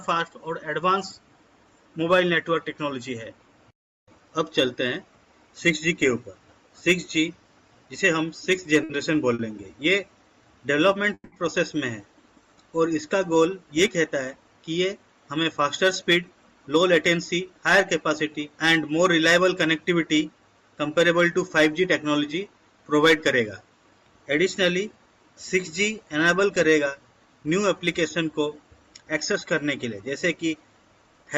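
A couple of short stalls from late packets come first, at 8.83 to 8.91 s and again at 9.34 to 9.41 s. The jitter buffer ran dry and the receiver held the last sound for about 60 ms and then 50 ms, so you hear a brief smear before it picks up where it left off. At 11.14 to 11.34 s there's a call audio freeze, where the sound hangs as a fading buzz with about 50 ms of near silence, then resumes without skipping anything. That's likely packets held up in transit. Later, jitter buffer speed-up kicks in at 14.70 to 17.82 s (about 103% speed), 22.93 to 24.71 s and 26.87 to 29.34 s (both about 102%). The receiver trims tiny pitch-period slices to shed backed-up delay, roughly a tenth of a second in the first stretch and a few hundredths in the others, so the audio runs slightly faster at the same pitch.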